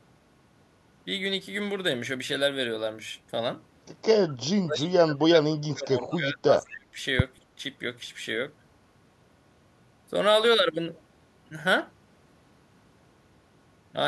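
From 4.61 to 6.96 s the echo canceller likely faced double talk: with both ends speaking at once, it could not tell the near talker apart from loudspeaker echo and pulled everything down together. This speech suppressed in double talk sounds like the talker ducking away. Level falls by as much as roughly 30 dB at its deepest, and the affected stretches add up to around two seconds within that window.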